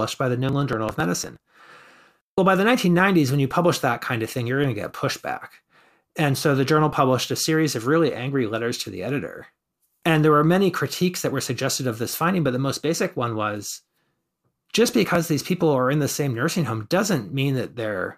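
From 0.49 to 1.45 s, and again from 14.93 to 15.15 s just before "these people are in", the speech carries processor overload crackle. The processor repeatedly failed to deliver its audio buffers on time, and each missed block was skipped outright, leaving short hard-edged gaps. Their spacing suggests buffers of around 10 ms, with about twenty missed in the first burst and a handful in the second, heard as gritty tearing over the voice.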